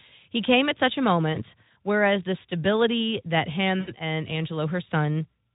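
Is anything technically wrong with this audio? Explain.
Yes. From 3.79 to 3.90 s, speech smears into a fading buzzy tone or coloured noise. This is VoIP packet loss concealed by the speech codec: about 80 ms of packets went missing, which fits four lost frames, and the decoder extrapolated its last pitch and filter while lowering the gain. The surrounding Speex coding, consistent with roughly 15 kbps, shows light codec damage.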